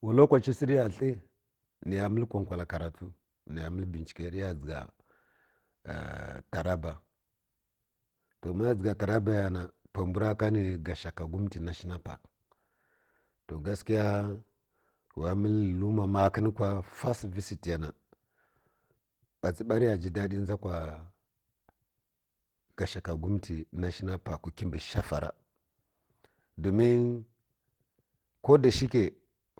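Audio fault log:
Throughout: Opus voice compression, speech audibly hoarse and slightly robotic; coarse excitation coding at bitrate consistent with about 16 kbps hybrid mode smears detail.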